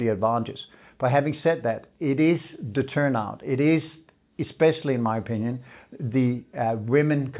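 Nothing in this recording jumps out as a technical fault; it just runs along without a hitch that the ear can catch.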